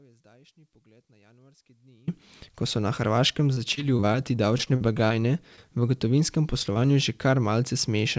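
From the start until 2.08 s the speech is already missing, an audio dropout to a faint residue: only a weak trace remains, far below normal level, likely from a signal loss with the path still live.

Between 3.54 and 4.16 s, and again from 4.58 to 5.12 s, repeated packet loss produces choppy, robotic speech. Each stretch has six patched gaps, the longest 26 ms and 44 ms.

From 6.73 to 6.81 s a short concealed packet loss leaves a brief smear where about 20 ms was synthesised from the preceding sound.

Throughout, nothing is heard above 8 kHz, which fits a wideband call codec such as G.722.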